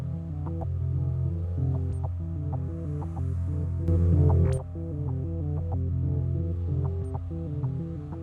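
At 3.88 s the music and its background noise jump about 8 dB louder together until 4.58 s, a sudden gain jump likely from an unramped digital gain change.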